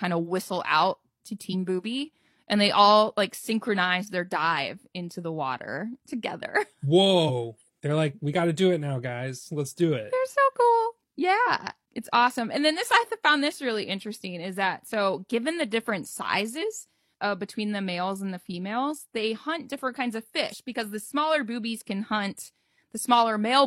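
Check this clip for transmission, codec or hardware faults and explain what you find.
The speech has one recurring codec fault: damaged data in a compressed stream, heard five times, at 1.49–1.55 s, 7.25–7.31 s, 11.43–11.48 s, 16.58–16.63 s and 20.48–20.55 s. At each point the decoder met corrupted frames, misread them and had to hunt for the next valid frame header before normal decoding resumed. Each disturbance lasts roughly 50 to 65 ms. A simple click or pop would be a single near-instant spike.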